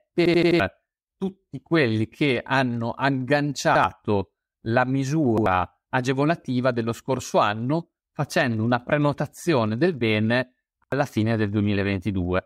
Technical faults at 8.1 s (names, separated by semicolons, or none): none